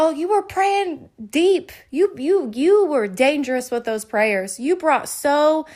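Nothing in this speech recording reveals any technical fault.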